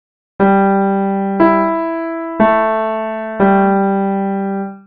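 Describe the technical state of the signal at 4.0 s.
At 4.0 s the signal is intact, with no dropout, distortion, glitch or other fault audible at that point.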